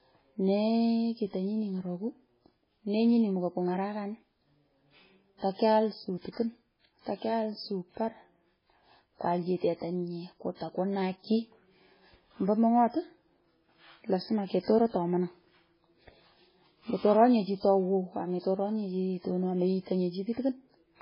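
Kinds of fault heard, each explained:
MP3 compression: the encoder was likely starved of bits, which fits a very low bitrate of around 16 kbps, so it dropped everything above 5.3 kHz and let weak frequency lines flicker between frames, leaving this speech dull, watery and swirly throughout, with smeared consonants.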